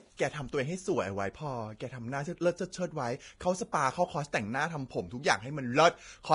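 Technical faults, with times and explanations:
Throughout, Vorbis compression: the speech is band-limited with nothing above 10.6 kHz, and the remaining treble sounds hissy and grainy, with roughened sibilants and smeared consonant onsets. The likely cause is heavy Vorbis coding at a low setting, which fits a bitrate around 30 kbps. At that rate the encoder trims the top band and quantises the upper residue so coarsely that fine detail becomes noise-like energy sitting on the spectral floor.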